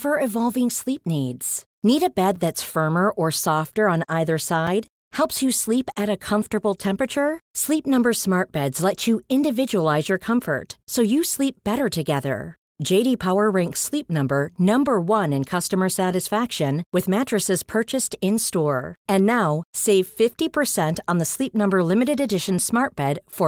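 It's a speech clip with two blocks of digital silence, each about 5 ms long. The first lands at 2.36 s, right after "a bed" and before "that's firmer or softer", and the second at 4.67 s, just after "or softer on either". In each, the samples drop straight to zero and back without any fade, so the hard edges come through as quick ticks. The likely cause is the output buffer not getting filled in time. Underneath, there's a light touch of Opus voice compression.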